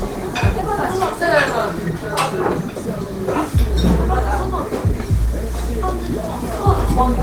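A recording of sounds carries plainly audible Opus compression from start to finish, likely hybrid-mode encoding at about 16 kbps: tones come out hoarse, grainy and rough. A spectrogram shows noise-filled, smeared bands instead of clean partials, with a cutoff near 20.2 kHz.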